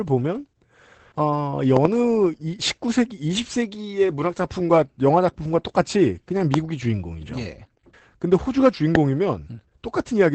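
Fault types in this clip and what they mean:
Opus voice compression: speech sounds muffled, hoarse and faintly robotic throughout, with nothing above 8.7 kHz, unlike a plain low-pass. This fits SILK wideband near 12 kbps.
Loud pop: sharp pops about 20 dB above the speech, a double pop at 1.77 s, then single pops at 6.54 and 8.95 s, likely from electrical steps, with speech continuing underneath.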